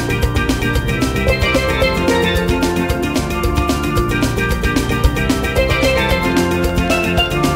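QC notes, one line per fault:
5.01–7.46 s, train of clicks: something, likely interference from nearby equipment or a faulty connection or power supply, keeps injecting a pulse into the signal at a regular 5.33 per second, giving about fifteen clicks over this stretch. Each pulse has much the same shape and peaks some 5 dB above the surrounding sound. The result is an even, steady ticking laid on top of the audio rather than tracking whatever the sound does.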